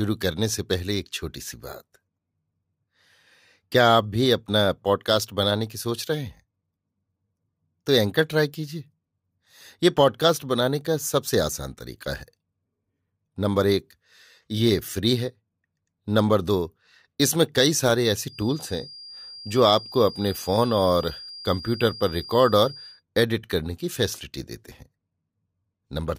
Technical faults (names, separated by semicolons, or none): feedback whistle